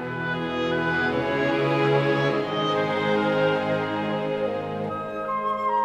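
No technical faults can be heard anywhere in the audio. Nothing in the sound points to a problem at any moment.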